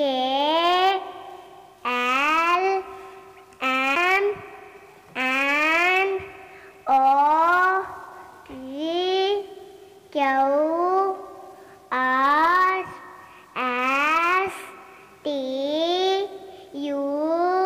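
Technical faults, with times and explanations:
3.95 s, CD skip: the laser jumped to another turn of the spiral, giving a tick, a brief mute of a few milliseconds, and playback resuming from elsewhere.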